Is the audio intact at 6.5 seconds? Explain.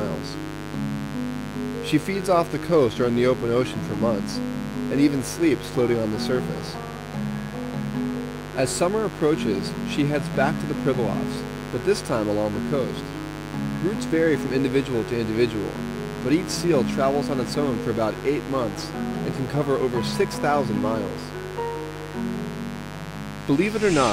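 No. Mains buzz runs through the whole clip, including 6.5 s. Sharp switching spikes leak in twice per 50 Hz cycle, giving a raspy buzz only about 10 dB below the signal, seen as evenly spaced 50 Hz harmonic lines stretching into the kilohertz range.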